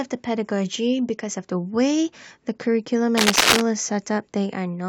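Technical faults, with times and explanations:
3.17–3.61 s, cable scratch noise: a dense, uneven scratching rustle sits a little louder than the speech, likely from a worn cable or connector shifting its contact. The waveform shows jagged, irregular bursts, and the spectrogram shows clustered broadband vertical streaks.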